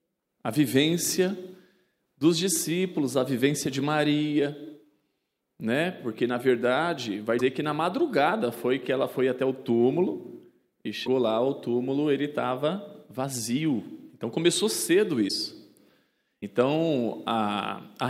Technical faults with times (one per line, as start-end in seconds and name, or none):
7.38-7.41 broken MP3 bit reservoir
11.05-11.08 broken MP3 bit reservoir
15.28-15.30 broken MP3 bit reservoir
16.41-16.43 broken MP3 bit reservoir